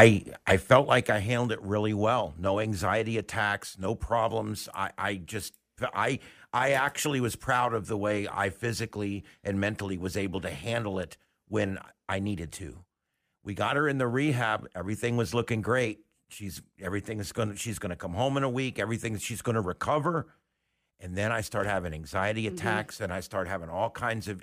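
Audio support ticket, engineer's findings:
Zipper noise, 0.37–1.31 s: stepped gain ramp, about 2 dB steps at roughly ten per second, falling about 15 dB overall; unsmoothed gain updates click audibly on the speech.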